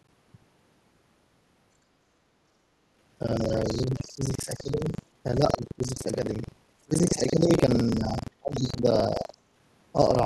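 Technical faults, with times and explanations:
Throughout, buffer tearing: a steady robotic rattle at 23.4 Hz rides on the speech whenever sound is present, which fits a 2048-sample buffer. Writer and reader have slipped, so roughly a third of each period replays audio about a tenth of a second old, with hard joins either side.
3.36–4.85 s, 5.37–6.06 s and 6.85–9.34 s, speech suppressed in double talk: the talker's level sinks in pieces, by about 15, 20 and 25 dB at worst. The likely cause is an echo canceller that cannot separate talker from loudspeaker echo and turns both down.
3.55–4.63 s, 5.50–5.57 s and 8.53–8.72 s, other side's voice leaking through: a second voice surfaces about 20 to 25 dB below the talker, from a brief scrap to a second-long stretch. This likely comes from loudspeaker playback that the echo canceller did not fully remove from the microphone.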